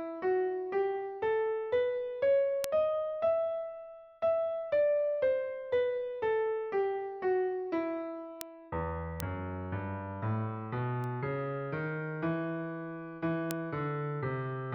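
Bit error spikes occur at 2.64, 8.41, 9.20, 11.04 and 13.51 s. Each is a single flipped bit forcing a sample or two to jump by a power of two and return, peaking around -9 dBFS (about -27 dBFS at 11.04 s), heard as an isolated broadband tick unrelated to the sound.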